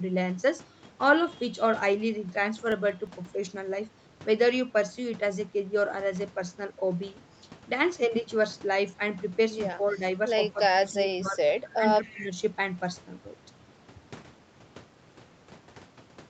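From 2.54 to 3.25 s, CD scratch ticks: a disc blemish defeats error correction on each revolution, so five brief clicks of a few milliseconds each interrupt the speech. Between 9.91 and 11.84 s, speech is suppressed in double talk, likely because the echo canceller mistook overlapping talk for loudspeaker echo: the voice dips by about 5 dB at 9.91 s, up to about 15 dB across 10.53–11.52 s, and about 10 dB at 11.75 s. From 12.03 to 12.14 s, an echo leak is likely, with residual loudspeaker pickup returned 258 ms late as a faint copy about 25 dB below the speech. From 12.13 to 12.35 s, the same double-talk suppression pulls the voice down again by about 10 dB.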